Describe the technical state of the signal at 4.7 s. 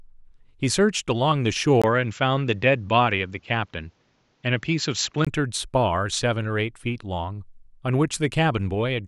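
At 4.7 s you're inside a stretch from about 1.82 to 5.27 s where the sound has gone duller and boxier, with nothing above 7.6 kHz, a faint new noise floor somewhere around 45 dB under the speech, and no real jump in level. A 20 ms gap marks the change at 1.82 s. That's likely the input switched to a poorer device, one with a narrower band and its own background noise.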